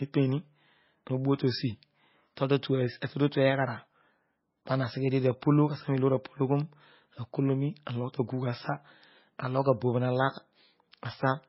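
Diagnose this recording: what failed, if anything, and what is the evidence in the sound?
The fault sits at the codec stage and runs through the whole speech clip. Nothing is present above 5.6 kHz. The sound has the smeared, watery texture of heavy lossy coding. A high-bitrate file would not show either trait. The likely cause is low-bitrate audio saved at a high bitrate: an MP3 made at a very low rate, which fits roughly 18 kbit/s, was re-encoded at a far higher rate. The second pass kept the damage and restored nothing.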